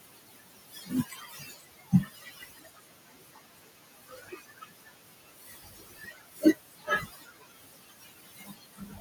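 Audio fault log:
throughout, noise suppressor artifacts: frame-by-frame band gating pulls the background down between words and lets it rise under them, and on a spectrogram the noise floor looks patchy, with isolated flickering blobs.
0.00–9.01 s, speech cut by the noise suppressor: quieter parts of the speech are treated as noise and pulled down by up to about 21 dB, sounding swallowed, with faded energy and sudden dips in the waveform.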